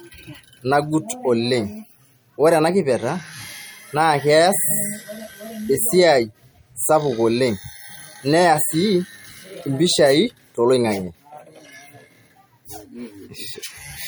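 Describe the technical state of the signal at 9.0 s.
At 9.0 s the speech carries MP3 compression artefacts, as it does throughout, and lossy encoding is the likely cause. Starved of bits, which fits an MP3 at around 64 kbps, the encoder drops weak frequency lines that flicker on and off between frames. The result is clearly audible: a watery, swirling texture, metallic chirps on s sounds, and smeared consonant attacks.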